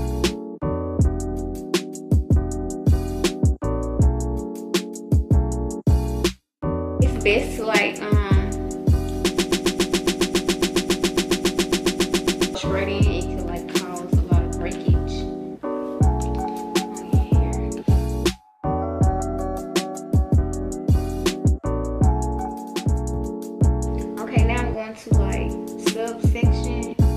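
From 9.38 to 12.55 s, a broken-record loop repeats one 0.14 s fragment 23 times, likely a stalled stream; the spectrogram shows identical tiled blocks.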